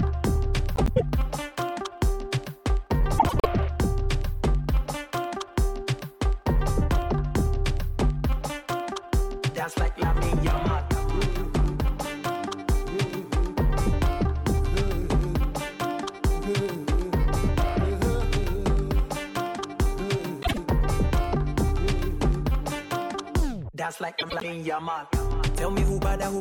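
At 0.75–1.02 s, 3.18–3.46 s, 20.42–20.58 s and 24.18–24.44 s the audio has frames out of order. Two adjacent blocks of about 104.5 ms each (52.2 ms at 20.42 s) swap places, which fits runs of four frames, or two in the shorter case. Each stretch flutters and garbles. A spectrogram shows vertical seams where partials jump abruptly. The waveform shows sudden envelope steps, yet no time is lost.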